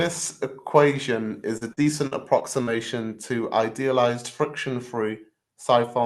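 From 1.57 to 2.69 s, just before "to idealized", repeated packet loss gives a choppy, robotic sound. Six holes, the longest 43 ms, are patched by stretching the previous sound, about 18% of the span. On a spectrogram the stretches show as smeared, repeated frames beneath the call codec's cutoff near 12 kHz.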